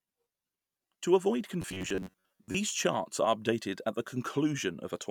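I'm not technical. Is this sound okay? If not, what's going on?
No. From 1.62 to 2.58 s, just before "charts are updated at", there is robotic sound from repeated short buffers. New audio was likely arriving too slowly, so the playback kept repeating a tiny slice of about 11 ms to fill the gaps, and roughly half the real sound in that stretch was skipped. Those rapid repeats force a steady buzz of about 94 Hz, so the speech turns hard and metallic while still loosely following the words.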